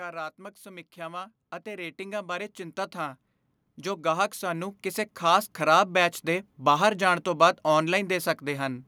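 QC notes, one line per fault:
0.63–3.27 s and 3.83–6.0 s, automatic gain rising: the automatic gain control judged the input too quiet and twice ramped its gain upward, by about 9 dB then about 7 dB, so speech and background noise swell together over two to three seconds each time.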